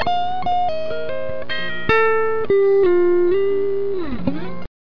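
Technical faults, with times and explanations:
Nothing technical jumps out here; the audio runs along without anything worth flagging.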